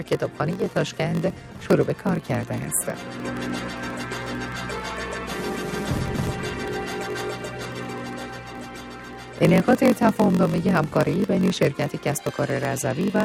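From start to finish, a steady buzz at about 46.9 Hz runs under the sound. This is a block size mismatch (padded): one stage delivers blocks shorter than the next stage reads, and the shortfall in each block is filled with silence. The buzz rate fits a 1024-sample read, and the audio plays at 0.938 times its normal speed. Unlike a sample-rate error, the slowdown leaves pitch essentially unchanged, and unlike random dropouts, the gaps are perfectly regular.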